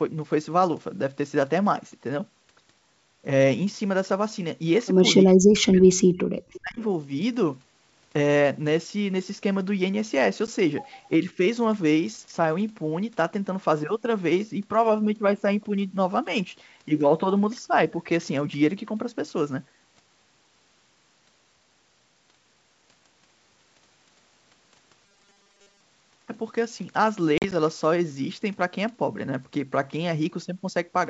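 Speech suppressed in double talk, from 5.25 to 6.81 s: the voice sinks sharply, by roughly 40 dB at its deepest, across about one and a half seconds. The likely cause is an echo canceller that heard both ends talking at once, could not tell its own talker apart from the loudspeaker return, and pulled everything down together.

Echo leak, from 6.55 to 6.60 s: a brief scrap of the voice comes back about 379 ms late, sitting about 25 dB below the live speech. It likely comes from a far end on a loudspeaker whose echo canceller missed part of what its microphone picked up, so a faint delayed copy slips into the return path. It is heard as a short ghost of the sound.

Packet loss on an ADPCM call, at 10.47 s: a 10 ms hole opens with hard edges. Through the wideband path, which fits G.722 at its full rate with clear sound up to about 7 kHz, the decoder's adaptive predictor and step size fall out of step with the sender's when the audio stops. 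The sound resumes slightly distorted before settling within tens of milliseconds.

Speech suppressed in double talk, from 11.21 to 11.40 s: a much milder dip of about 5 dB lasts around 100 ms. It is likely the same canceller briefly ducking the talker while the other side makes sound, and it is heard as a slight softening.

Robotic sound from repeated short buffers, from 25.05 to 25.80 s: the sound turns into a rigid metallic buzz at 200 Hz that still roughly tracks its rises and falls. That pitch fits a 5 ms buffer being replayed. The likely cause is fresh audio arriving too seldom, so the software fills roughly 70 percent of the span by looping the last slice while the real signal is skipped.

Packet loss on an ADPCM call, from 27.38 to 27.53 s: 60 ms of audio go missing in several gaps spread over 140 ms, the longest lasting 40 ms. This points to a run of several lost packets. Each silent gap ends abruptly, and the decoder's predictor comes back mismatched after it, which leaves the sound slightly distorted as it stutters through.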